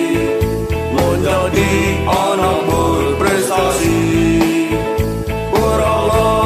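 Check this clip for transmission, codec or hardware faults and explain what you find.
One fault: a filter restarted on every block, from 4.96 s to the end. Each 40 ms block starts from silence, producing a 25 Hz buzz that tracks signal level, unlike mains hum's fixed level.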